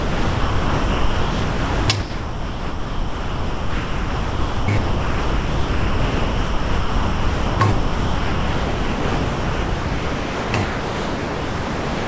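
From 0 to 1.88 s, 2.00 to 4.68 s, 4.78 to 7.60 s, 7.72 to 10.54 s and 10.64 s to the end, the sound gives way to steady comfort noise, with only brief bursts of about 0.1 s breaking through between stretches. This is likely sound dropped by the voice detector, which judged the material to be background. A spectrogram shows flat, featureless noise bands ending at 8 kHz, and the waveform is a low, even floor.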